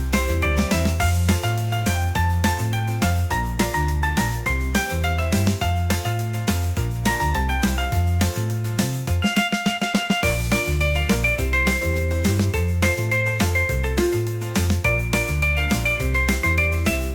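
Nothing in the clip stands out as a technical problem; it runs along without any glitch, dropout or distortion to point to.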